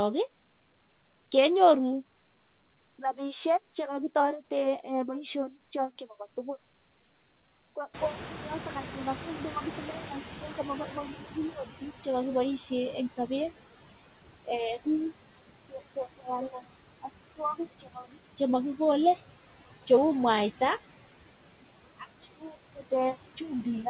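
Speech runs through a noise suppressor that leaves noise suppressor artifacts throughout, pulling steady background down by about 17 dB frame by frame, so residual noise dips between phrases. When the room noise jumps by about 23 dB near 8 s, the noise suppressor is catching up from 7.93 to 12.57 s. Its noise estimate takes about 4.6 s to adapt, so the louder noise passes with only about 13 dB of reduction before sinking. Speech cut by the noise suppressor occurs at 16.18–16.27 s, 17.83–18.26 s and 22.39–22.55 s, where soft speech segments of roughly 100 to 150 ms are mistaken for noise and dropped by up to about 14 dB, sounding swallowed. Nothing is present above 4 kHz, which fits a G.711 A-law call path at 64 kbps.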